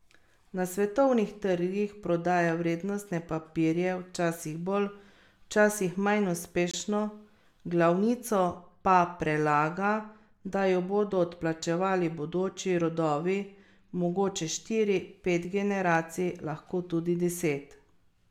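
Corrupt frame muted at 6.71 to 6.75 s: damaged compressed frames were rejected by the decoder and replaced with silence, leaving an abrupt 42 ms hole in the speech, consistent with two frames of about 20 ms. The timing around the gap stays intact.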